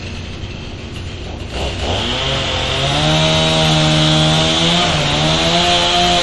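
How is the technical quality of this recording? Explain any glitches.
The technical quality is poor, with plainly audible compression damage throughout.

MP3 compression runs the full length of the recording and is likely the cause of the damage. Nothing is present above 11.3 kHz, which fits a low bitrate around 48 kbps. When an encoder is that starved of bits, it removes the treble at a fixed point and drops quieter frequency components that flicker in and out between frames. The sound comes across watery and swirly, with metallic chirping on bright, noisy detail and blurred attacks. On a spectrogram there is a hard horizontal ceiling at 11.3 kHz, with scattered, blotchy holes beneath it.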